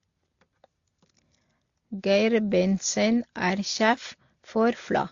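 Throughout the speech, nothing is heard above about 7.2 kHz, and the unlike artefacts of three codecs are heard together. A single low-bitrate encode would leave one consistent signature, so this is transcoding between lossy codecs, likely low-rate AAC later re-encoded to Opus.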